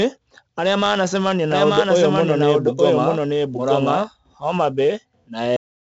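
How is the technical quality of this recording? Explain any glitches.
The recording has poor technical quality: heavy codec damage throughout, a stretch where the speech is doubled, and an abrupt ending.

4-bit ADPCM compression, present for the whole clip: each sample is stored only as a coarse 4-bit step from a predicted value, so the quantisation error becomes broadband noise that rises and falls with the speech. Here it is heavy, heard as gritty hiss riding every loud syllable and roughness on sharp onsets. Nothing is present above 7.8 kHz, which fits a 16 kHz sample rate at 64 kbps and dulls the top end.

Doubled audio track, from 1.52 s to 4.08 s, just after "arĩa manacemania": a second full-band copy of the speech runs about a second behind the original and at roughly the same level, so two overlapping streams of speech compete. The copy has no reverb tail or room colouring, and it appears and vanishes abruptly at its edges. 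The cause is likely a second capture of the same signal through a slower path being mixed back in.

Cut-off end at 5.56 s: the speech stops mid-sound and drops straight to digital silence for the remaining fraction of a second, with no natural decay. This happens when the final buffers of audio were never written or played out, so the recording ends in the middle of the speech rather than after it.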